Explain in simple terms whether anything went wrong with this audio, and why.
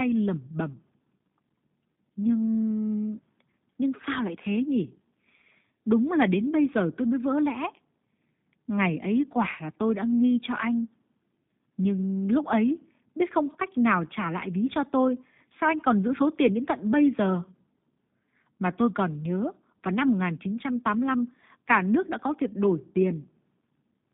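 Yes. The whole recording went through the G.729 codec, a phone-call compressor. It keeps only a narrow band, roughly 150 Hz to 3.7 kHz, so the speech sounds thin and muffled. It rebuilds each short slice from a rough model, which plainly adds a rough, synthetic edge.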